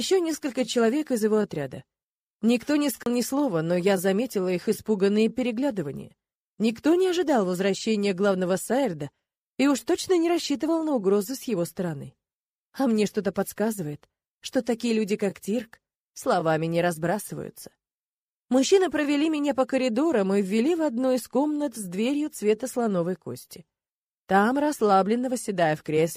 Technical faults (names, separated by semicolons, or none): CD skip